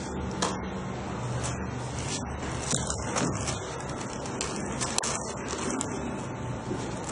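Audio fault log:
There is no fault in this audio.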